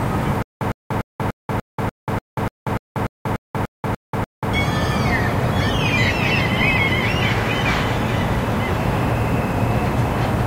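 From 0.42 to 4.54 s, stutter with silent gaps: identical 108 ms blocks repeat every 294 ms between flat, silent gaps, likely from a stalled stream replaying.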